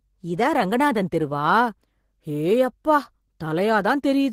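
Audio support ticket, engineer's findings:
Nothing stood out on listening.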